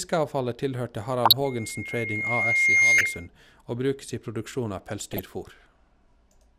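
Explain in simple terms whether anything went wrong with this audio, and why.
Two problems can be heard in this speech. DAB burbling appears in three short bursts, at 1.25 to 1.33 s, 2.98 to 3.06 s and 5.12 to 5.26 s. Weak digital radio reception lets damaged data slip past error correction, so parts of the sound briefly jump in level and bubble or chirp.

A loudspeaker feedback squeal runs from 1.44 to 3.28 s. A microphone picked up its own loudspeaker, and one pitch, around 2.1 kHz, kept looping and growing. It swells over about a second and a half into a piercing tone louder than the speech.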